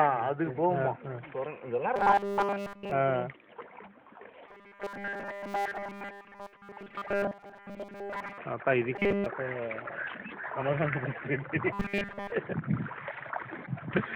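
The audio carries robotic sound from repeated short buffers in four stretches: 1.96 to 2.91 s, 4.48 to 8.39 s, 8.96 to 9.27 s and 11.73 to 12.32 s. Each imposes a rigid, metallic buzz at 200 Hz, which points to a 5 ms block being replayed, likely because new audio arrived too late and playback repeated the last block while fresh material was skipped. In the first and last stretches nearly all the audio is repeated, and in the middle two roughly 70 percent. A separate fault, damaged data in a compressed stream, occurs from 13.62 to 13.68 s. There the decoder misreads corrupted frames, loses sync and searches for the next valid frame header, leaving a brief disturbance of about 50 ms where the sound does not continue cleanly.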